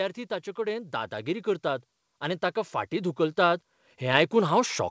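From 0.55 s to 4.8 s the automatic gain is rising: the control judged the input too quiet and kept turning its gain up, about 12 dB over roughly four seconds. The speech and the room noise beneath it swell together, and that shared rise is what separates it from a talker leaning closer to the microphone, where the voice would grow while the background stayed put. The whole clip also shows the call codec's ceiling, with nothing above 8 kHz.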